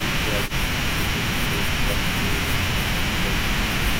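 The talker's level sags repeatedly: briefly at 0 to 0.04 s, then over 0.24 to 0.97 s, 1.37 to 1.61 s, 1.83 to 3.01 s and 3.19 to 3.51 s, dropping by roughly 10 to 15 dB at the deepest points, with the longest stretch patchy rather than continuous. This is likely speech suppressed in double talk, where an echo canceller mistook near-end speech for loudspeaker echo and attenuated it while the far end was talking.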